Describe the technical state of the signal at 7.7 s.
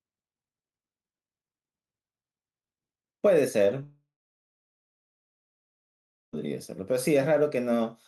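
At 7.7 s the speech signal is intact, with no technical fault at that moment.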